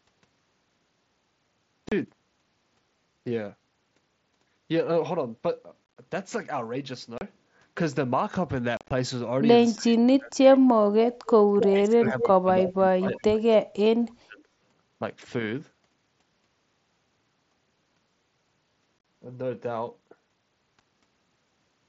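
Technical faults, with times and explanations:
1.89–1.92, 5.85–5.97, 7.18–7.21, 8.77–8.91, 18.99–19.05 and 20.80 s, unconcealed Bluetooth headset packet loss: the sound drops out in abrupt holes between headset and phone, from a lone 7.5 ms gap to clusters of about 82 to 90 ms scattered over 120 to 135 ms, which sound chopped and crackly. The gap sizes fit lost 7.5 ms mSBC frames, left silent with nothing filled in. The wideband headset codec itself passes speech up to 8 kHz with only light grain.
9.75–10.6, 11.5–13.42 and 13.62–14.44 s, speech suppressed in double talk: the voice sinks by roughly 30 to 35 dB in pieces, cutting out across most of each stretch. This is likely an echo canceller that could not tell its own talker from loudspeaker echo while both sides spoke, so it turned everything down.
11.61–11.65 and 12.07–12.26 s, echo leak: a copy of the speech arrives 278 ms late, first as a brief scrap about 5 dB below the direct speech, then a longer fragment about 10 dB down. 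This is likely a far-end loudspeaker whose echo canceller let part of the pickup slip back into the call.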